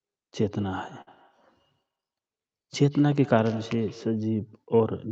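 Speech runs through a feedback echo between two devices from 0.5 to 4.32 s: a second device in the room plays the call back into the first microphone, which the local echo canceller cannot remove, so each syllable returns about every 150 ms, thinner and more ringing, peaking at about 22 dB below the speech. On a spectrogram this shows as faint, evenly spaced copies trailing each burst of energy, and in the waveform as small repeated envelopes after each onset. At 1.01 to 1.09 s there is a short stall from a late packet: the jitter buffer ran dry and the receiver stretched the last sound for 55 ms until the packet arrived, so nothing is lost but a sound is held slightly too long and everything after it is 55 ms later. That appears as a smeared, flat horizontal patch on the spectrogram and a repeating, level stretch in the waveform. The spectrogram also shows no energy above 8 kHz, consistent with the call's codec bandwidth.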